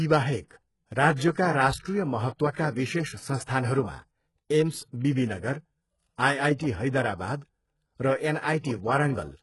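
From start to finish the speech carries heavy coding damage: s sounds come out gritty and lispy, and the top of the spectrum sounds bright yet synthetic, ending sharply near 11.5 kHz. That mix points to HE-AAC compression, likely at a very low bitrate near 12 kbps. The treble is rebuilt by copying lower bands upward rather than coded directly, so harmonics fail to line up across the join. A plain low-pass would sound dull instead.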